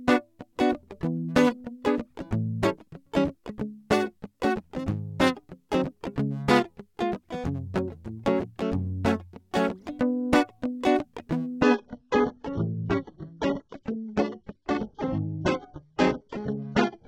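It's a music clip, and at 11.62 s it abruptly falls back to a lower-bitrate version of the adaptive stream without any gap, staying there to the end. Everything above 8 kHz vanishes, pointing to a drop from decent AAC to a very low-bitrate HE-AAC feed after the connection slowed.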